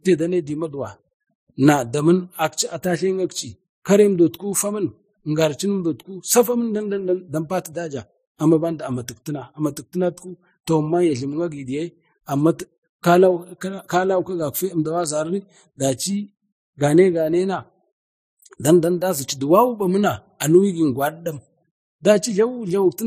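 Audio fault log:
throughout, transcoding between lossy codecs: the speech carries two layers of coding artefact at once, smeared swirly highs over a grainy, pre-echoed texture, with the high end capped by the lowest cut-off in the chain. This likely comes from an MP3 pass near 37 kbit/s re-encoded as Vorbis near 38 kbit/s. A single codec would produce one kind of damage, not two stacked.
2.62 s and 15.04 s, dropped samples: each is one sharp, isolated click, a thin vertical line through the spectrum. The waveform likely jumps forward where a fraction of a millisecond of samples went missing. No sound is lost and no silent gap appears, which sets it apart from a dropout.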